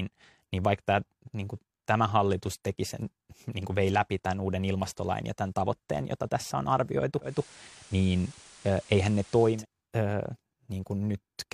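Digital radio blending to analogue occurs from 7.21 to 9.66 s, just after "jota tässä on arvioitu". The receiver lost its digital stream and cross-faded over about 197 ms to the station's FM broadcast, returning to digital at the end. During the FM stretch, hiss sits roughly 25 dB below the speech and the level shifts by about 2 dB, so the passage sounds noisier than its surroundings.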